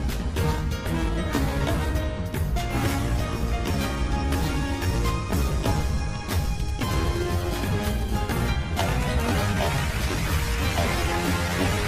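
From 6.45 to 8.03 s, a nearby 2G handset emits only brief clusters of radio bursts, the way it does while signalling rather than carrying a call, and the audio circuitry rectifies that energy into the sound path. These are GSM signalling bursts. They come through as an irregular, galloping dit-dit-dit of short buzzes, each pulsing at about 217 Hz, sitting roughly 20 dB below the wanted sound and unrelated to it.

From 8.09 to 9.03 s, the phone moves into a call and transmits continuously in its slotted pattern of about 217 bursts per second. The circuitry again demodulates this as audio, producing a GSM phone buzz: a steady, hard, raspy tone at about 217 Hz, rich in harmonics that make it gritty rather than a clean hum. It sits about 30 dB below the signal and ends at 9.03 s.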